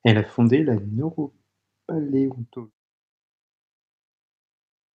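Nothing stood out as a technical problem on listening to this speech recording.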